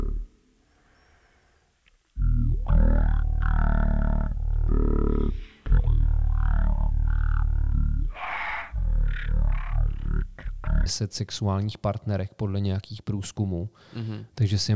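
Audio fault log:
0.00–10.86 s, wrong sample rate: the speech runs at roughly a third of its proper speed, 0.363 times, and its pitch falls by 17.6 semitones, so voices come out deep, drawn-out and sluggish. Speed and pitch drop together because the samples are clocked out far slower than they were captured, with no resampling in between. The ratio fits audio recorded at 44.1 kHz being played back at 16 kHz.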